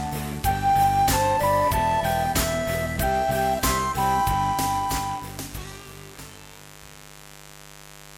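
A mains buzz runs through the whole clip, from start to finish. Sharp switching spikes at twice the 50 Hz mains rate are leaking into the signal path, spreading harmonics into the kilohertz range. The result is a steady, raspy buzz sitting roughly 20 dB below the sound.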